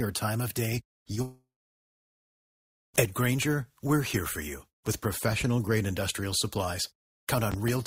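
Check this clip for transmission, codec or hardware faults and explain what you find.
Three faults are present, all transmission or hardware rather than codec.

Short concealed packet loss at 1.03–1.07 s and 1.15–1.18 s, just after "or time of day": about 20 ms never arrived, and the receiver extended the preceding sound, causing brief smears. Unlike a dropout, real audio resumes almost immediately.

Long network dropout at 1.22–2.96 s: a stretch of about 1.72 s was lost, likely from a network stall. Concealment briefly continues the last sound and fades, leaving about 1.44 s of silence before the audio returns.

Loud pop at 7.52–7.72 s: two sharp pops, about 10 dB above the sound, likely from an electrical or driver transient. The sound continues underneath, unlike a dropout.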